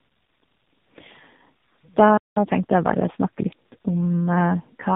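Throughout the speech, tandem speech coding leaves a rough, muffled, warbly texture, with nothing above 3.8 kHz. The damage sounds like two low-rate speech coders in series, consistent with G.729A, then G.711, then AMR-NB, each coder re-encoding the previous one's artefacts.

At 2.17 s a playback stall cuts the audio to silence for about 192 ms, until 2.36 s. The sound halts abruptly mid-flow and then resumes. The cause is likely the player running short of data or having its output thread blocked.

From 2.36 s to 3.62 s, time-compressed catch-up follows the stall. The player works off its backlog by trimming small segments and cross-fading the joins, so the speech runs about 1.15 times fast at its normal pitch.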